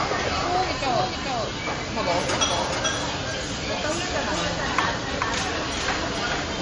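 An everyday sound recording with two faults running throughout. A doubled audio track puts a second, full-band copy about 5 dB quieter roughly 0.4 s behind, with no decay or room colour, so it isn't echo; a slow second capture path is the likely cause. Transcoding between lossy codecs leaves nothing above 10.5 kHz and mixes two kinds of artefact, unlike a single encode. The sound points to a likely low-rate MP3 then re-encoded as WMA.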